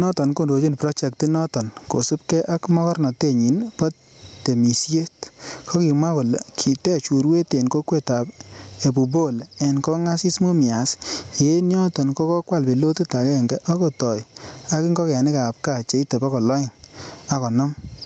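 Speech with gain pumping throughout, with a gain swing of around 20 dB. Loud and quiet passages sit close in level and sound squashed, likely from input gain set far too high with a fast limiter clamping it. Nothing is audible above about 8 kHz, which fits a wideband Opus call path.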